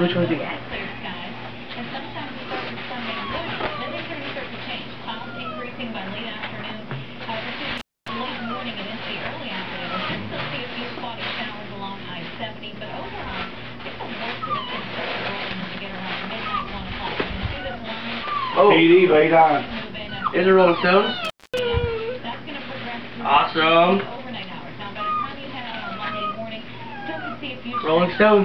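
At 7.78 s and again at 21.25 s the signal drops out through an intermittent contact, a loose cable or plug briefly opening the line. Each gap lasts about a quarter of a second (251 ms, then 238 ms), with crackle at the break and remake and faint hiss in between. On a waveform the trace collapses almost to zero between two spiky edges; a spectrogram shows a near-empty band bounded by thin vertical broadband streaks.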